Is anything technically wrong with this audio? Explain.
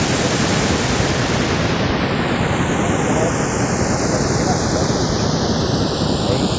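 Yes, there are two faults in this speech.

Throughout, the channels drift apart: separate clocks roughly 40 ppm off let the inter-channel delay creep to about a third of a millisecond. In mono this gives slow flanging, a steady sweep unlike a fixed comb.

From 1.04 to 1.08 s the speech dips by around 15 dB, most likely speech suppressed in double talk by an echo canceller ducking during overlap. It is a brief gated drop, not a gradual fade.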